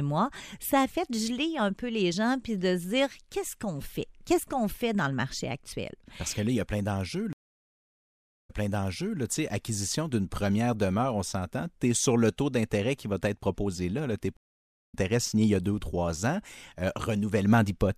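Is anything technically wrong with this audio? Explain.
Yes, there are two stream reconnects. At 7.33 to 9.19 s the speech stops for about 1.13 s, then resumes roughly 0.73 s earlier, so a stretch is heard twice. At 14.37 to 14.94 s a 0.54 s gap is followed by a jump ahead of about half a second. In both cases the connection dropped, the player went silent and then reconnected, and a fresh decoder picked up the stream at a different point.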